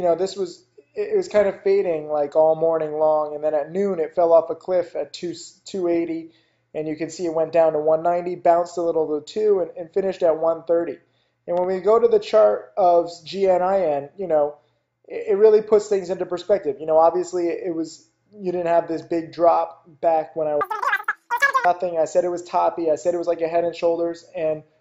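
From 20.61 to 21.65 s there is a wrong sample rate fault: samples are clocked out about 2.76 times faster than they were captured, which fits 16 kHz material played at 44.1 kHz without conversion. The audio rushes by, shifted up about 17.6 semitones.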